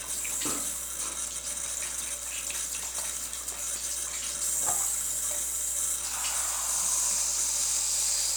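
Mains hum runs under the sound from start to finish. It is a steady low tone at 60 Hz, with some low harmonics above it. Power-line current has leaked into the signal path, likely through a ground loop. It sits roughly 25 dB below the wanted sound.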